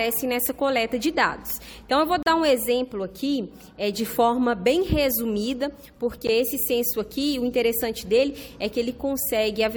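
At 2.23 to 2.26 s the sound drops out into a hard-edged hole of about 35 ms, and at 6.27 s a shorter, equally abrupt silence of about 14 ms cuts in. Both are a gap between stream segments: the timestamps of adjacent segments leave a small space that the player fills with silence. Nothing is missing from the audio itself, and the spacing of the holes fits 4-second segments.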